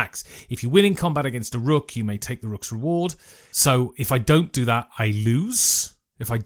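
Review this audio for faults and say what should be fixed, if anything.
Nothing to fix: no faults found, and the Opus coding at 24 kbps in hybrid mode keeps the full band.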